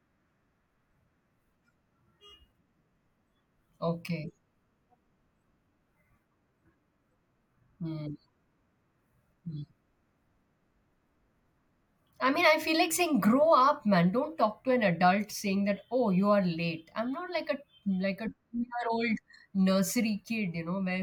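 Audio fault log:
No faults detected in the speech clip.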